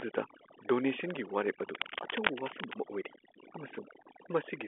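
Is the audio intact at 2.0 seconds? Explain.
No. From 1.75 to 2.74 s there is cable scratch noise. Dense, uneven bursts of scratching and rustling sit over the speech, only about 5 dB below it. The likely cause is a worn cable or connector being moved, so its contact resistance jumps rapidly.

Overdone noise removal also runs through the whole clip, including this moment. The noise reduction was set too strong. It pushes frequency bands near its noise estimate far down or off, taking quiet parts of the speech too. The background drops and breaks up into twinkling specks.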